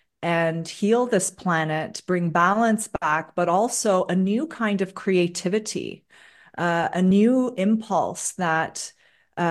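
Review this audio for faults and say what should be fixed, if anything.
Compressed frames skipped at 7.10 s: the audio jumps forward by a short stretch, something like 30 ms, which fits a couple of whole coded frames being lost or rejected by the decoder as damaged. At the seam, a small piece of the sound is simply absent. To prevent it, verify file integrity after encoding and transfer, and re-encode or resend any damaged segment.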